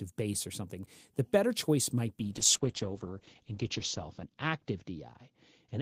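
From 2.21 s to the end, the sound turns muffled and rougher, losing its top end. This is a call bitrate drop: the connection's bandwidth estimate fell, so the encoder was told to go from 32 kbps down to 8 kbps. With so few bits, it codes the signal more coarsely and narrows the audio band from 20 kHz to 8 kHz. The worst of it holds for about 1.62 s.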